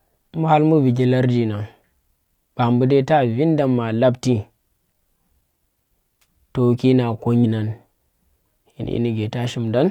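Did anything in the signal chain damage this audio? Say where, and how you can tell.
Yes: damaged data in a compressed stream, at 7.40 to 7.45 s, a brief glitch where corrupted codec frames broke decoder sync until the next frame header.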